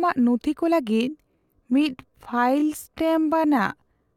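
Speech, and right after "ᱱᱩᱛᱷᱤ ᱠᱚ" at 0.83 s a time-stretched section runs to the end, slowed to about 0.67x with pitch held, so it drags, likely from software stretching.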